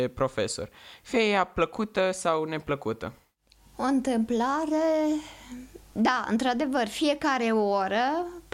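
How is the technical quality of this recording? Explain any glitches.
No glitches can be heard anywhere in the recording, and the speech signal stays continuous and stable throughout.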